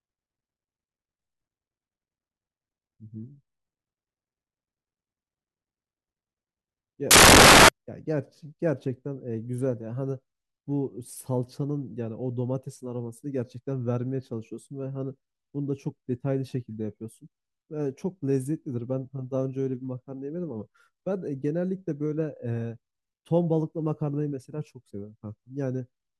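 From 7.11 to 7.69 s the speech gives way to loud, harsh broadband noise: samples built from the wrong bytes, the reader misassembling each value so the jittery low bits dominate.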